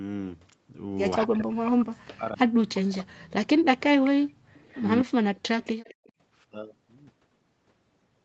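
From 1.26 to 4.4 s, and again briefly from 5.04 to 5.14 s, the speech is suppressed in double talk. The likely cause is an echo canceller that could not tell its own talker apart from loudspeaker echo while both sides spoke, so it pulled everything down. For about three seconds in the first stretch, the speech dips by as much as 40 dB. The later tenth of a second drops out the same way.

Echo leak shows up at 4.04 to 4.1 s, 4.56 to 4.85 s, 5.36 to 5.4 s and 5.61 to 6.12 s. The likely cause is an echo canceller on a loudspeaker end that let some of its microphone pickup slip through and sent it back. Each time, a copy of the speech returns 241 ms late, some 20 to 35 dB below the main signal. The short leaks come through as scraps, and the last one trails for half a second.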